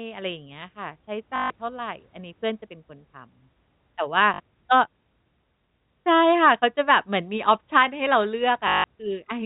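Short robotic stutters break the speech at 1.36 to 1.5 s, 4.34 to 4.4 s and 8.68 to 8.84 s, with a small blip at 6.02 s. The longer runs buzz at 50 Hz. This is packet loss with the last packet repeated: audio went missing, and the receiver replayed the final good packet until fresh audio arrived. The repeats fall out of step with the pitch, and the buzz rate fits 20 ms packets. Underneath, G.711 telephone coding keeps everything below 4 kHz.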